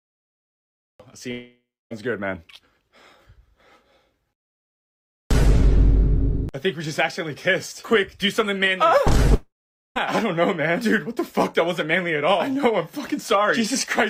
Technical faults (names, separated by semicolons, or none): long network dropout